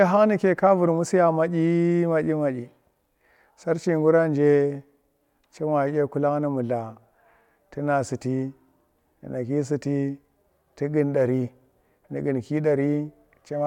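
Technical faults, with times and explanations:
No technical faults can be heard anywhere in this speech.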